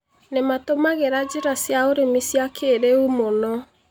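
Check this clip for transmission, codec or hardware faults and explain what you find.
The speech signal comes through intact, with no technical faults to be heard anywhere in it.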